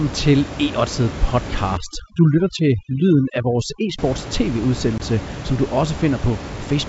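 From 1.77 to 3.99 s, overdone noise removal cuts bands near the room noise (about 11 dB below speech), leaving the background broken into twinkling specks. A spectrogram shows patchy holes and isolated dots.

From 4.98 to 5.01 s, packet loss on an ADPCM call leaves a hard-edged 20 ms silent gap, flat on the waveform. Slightly distorted speech follows while the decoder's predictor resynchronises.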